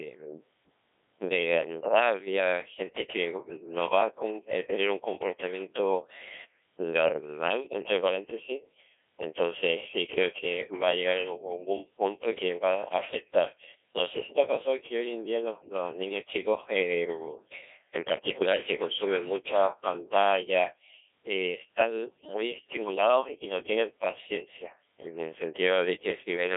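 Throughout, the speech carries heavy Codec 2 vocoder damage. Only pitch, voicing, energy and a coarse envelope survive, rebuilt from sine waves, which fits a 1.6 kbit/s mode. Voices sound robotic and buzzy. The spectrogram shows smeared harmonics confined to 300 Hz to 3.5 kHz, with nothing above 3.8 kHz.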